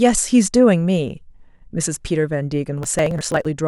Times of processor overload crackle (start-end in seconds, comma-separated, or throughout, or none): 2.83-3.45